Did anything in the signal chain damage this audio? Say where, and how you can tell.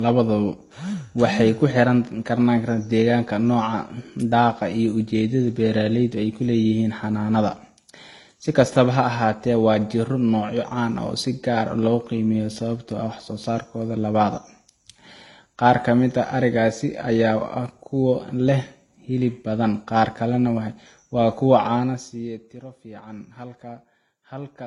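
Yes, at the codec stage, throughout the speech. Nothing survives above 11.4 kHz, and two different kinds of artefact sit together, which points to transcoding between lossy codecs, likely a low-bitrate Vorbis encode re-encoded to HE-AAC. A spectrogram shows a hard ceiling with smeared, patchy detail below it.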